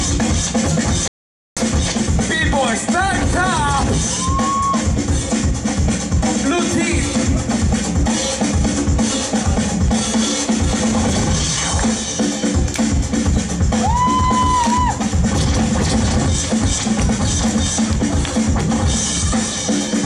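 A playback stall runs from 1.08 to 1.57 s. The sound stops abruptly in mid-flow and the output goes completely silent for 487 ms before it picks up again. Both edges are hard, with no fade in or out, so the gap sounds like a dropout rather than a natural pause. The likely cause is the player running out of buffered data, or its audio thread being blocked, so nothing reached the output until it recovered.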